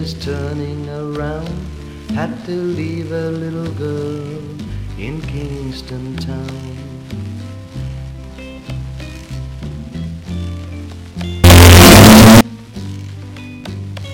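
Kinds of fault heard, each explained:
signed and unsigned mixed up: likely a 16-bit stream read with the wrong sign convention, so the top bit flips and every zero crossing leaps across the full range. From 11.44 to 12.41 s the sound turns into very loud, harsh distortion, with quiet moments as loud as everything else.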